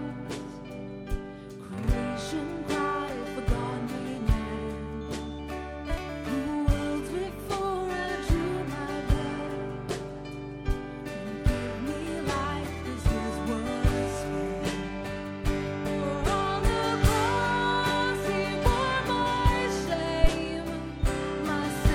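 At 20.24 s a phantom power thump lands, ending by 20.30 s. A supply was switched on a live input. The voltage step passed through the coupling capacitors. It sounds like a deep, sudden thud peaking near -7 dBFS, then dying away within about 13 ms.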